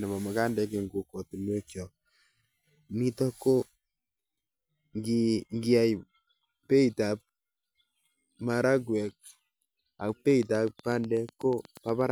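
From 10.31 to 12.02 s, a train of clicks ticks steadily, about eight per second, roughly fifteen in all. It peaks a few dB above the speech, likely from electrical interference.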